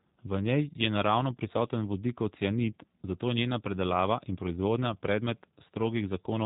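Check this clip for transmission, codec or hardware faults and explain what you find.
A single codec fault is present, and it lasts the whole clip. It is G.729 codec damage, and it is plainly audible. The speech is rebuilt from a vocal tract model, a pitch predictor and a few pulses per frame. This fits an 8 kbit/s G.729A stream. Nothing passes above 3.8 kHz, so the top end sounds cut off. The result is rough, buzzy and slightly synthetic.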